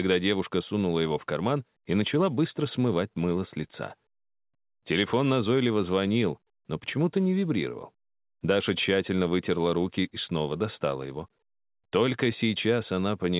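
No technical faults can be heard; the sound has passed through a call path whose band stops at 4 kHz, which fits narrowband G.711 A-law coding at 64 kbps.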